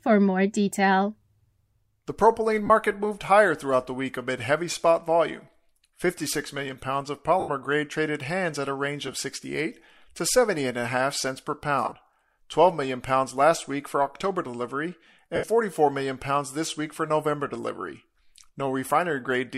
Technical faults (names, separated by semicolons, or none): lost LE Audio frames